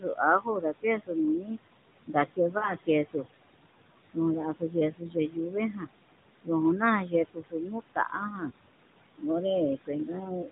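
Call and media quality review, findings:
Noise suppressor artifacts, throughout: background pumps down about 20 dB between phrases and returns under speech. Unlike plain room noise, which sits about 13 dB below speech, the level tracks the speech frame by frame.

Speech cut by the noise suppressor, 0.0–1.58 s, 2.07–3.25 s, 4.54–5.88 s, 6.44–8.51 s, 9.77–10.5 s: soft endings and quiet stretches sink by up to about 13–21 dB.

Lost AMR speech frames, 2.58–2.73 s: brief drawn-out warble, decaying, with a rough restart. The decoder is repeating the last good parameters at falling gain. The roughly 40 ms loss fits two 20 ms AMR-NB frames, unlike the suppressor's gradual level dips.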